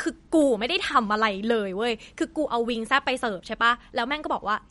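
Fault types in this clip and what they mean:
MP3 compression: The speech carries plainly audible codec damage, most likely from MP3 encoding squeezed for bits. Nothing comes through above 11.2 kHz, so the treble is sliced off flat, and the sound has that watery, swirly texture you get when weak frequency lines keep dropping in and out between frames. The overall degradation fits a low bitrate, something like 48 kbps, and it runs through the whole clip.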